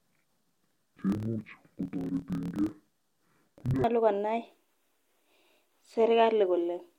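Speech, with interleaved audio read as planar from 0.0 to 3.85 s. Each 26.12 ms block is split in half, and both halves play at half speed. The sound drops an octave, doubles and turns choppy at 38.3 Hz, the block rate.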